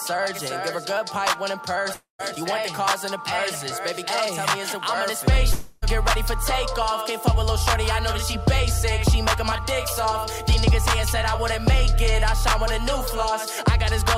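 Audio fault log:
1.93–2.21 s and 5.52–5.84 s, long network dropout: the sound smears into a fading buzz, briefly silent the first time, then returns with a chunk missing, likely from lost packets.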